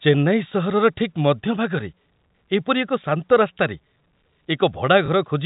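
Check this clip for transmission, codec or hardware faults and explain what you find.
One transmission fault appears near the end, heard through G.711 telephone band limiting at 4 kHz.

From 5.06 to 5.08 s, packet loss with last packet repeated occurs. One 20 ms packet went missing. The previous packet replays, giving a small blip.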